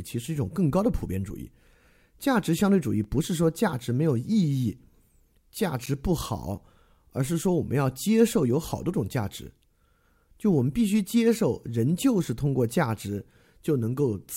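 A speech clip with two blocks of digital silence. At 3.04 s the signal drops to silence for about 5 ms. At 5.86 s it drops out for about 10 ms. Each gap starts and ends abruptly, with no fade, so the waveform jumps at both edges. At these lengths each dropout is heard as a tick or dip rather than a hole. The usual cause is an output buffer that was not filled in time.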